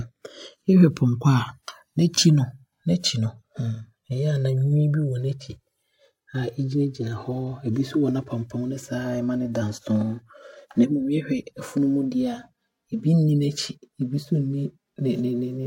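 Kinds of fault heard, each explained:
Channels drifting apart: the two channels run on separate clocks, one off by roughly 300 parts per million, so the delay between them keeps growing through the speech and ends near 5 ms. Summed to mono, the left and right copies cancel at a set of comb notches that creep steadily down the spectrum as that delay increases. The result is a slow, continuous flanging swirl laid over the whole clip rather than a fixed tonal colour.
Corrupt frame decoded: at 2.14 to 2.23 s, damaged bits in what sounds like about two consecutive compressed frames were decoded and played instead of being rejected. Misread gains and spectral codes put energy where none belongs, producing a burst peaking around about -5 dBFS. It lasts roughly 90 ms, which fits the span of a couple of frames.
Compressed frames skipped: at 8.53 s, a stretch of about 40 ms of the speech is simply absent, because the frames carrying it were never played, either missing or discarded by the decoder as unreadable. 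The audio jumps forward by that amount, consistent with a whole number of frames.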